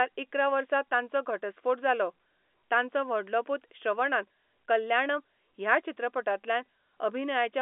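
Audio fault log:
No fault to log for this audio.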